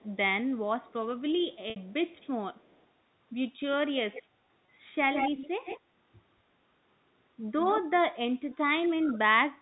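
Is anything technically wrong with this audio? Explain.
Yes, three kinds of fault are audible.

Echo leak: at 0.0–0.05 s, 0.83–2.86 s, 4.12–4.23 s, 5.13–5.8 s, 7.59–7.81 s and 8.49–8.56 s, a delayed copy of the speech trails it, lagging 208 ms in the first two stretches and 150 ms later. It is very faint early on and close to the main speech's level around 5.1–5.8 s. The likely cause is a far-end loudspeaker whose echo canceller let some of its own playback back into the microphone.

Packet loss with pitch repetition: at 1.70–1.76 s, 60 ms of audio went missing, and at 4.66 s a further 20 ms. The receiver filled each gap by repeating the last pitch cycle. In the short 20 ms gap the speech briefly holds on a buzzy, sustained tone before continuing. In the 60 ms gap the repetition fades into silence, and the speech returns with a short cross-fade.

Speech suppressed in double talk: from 8.6 s to the end, while both sides talk, the near speech dips in pieces by as much as about 25 dB, over roughly half a second in total. 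The likely cause is an echo canceller that could not tell the talker from the echo and turned everything down.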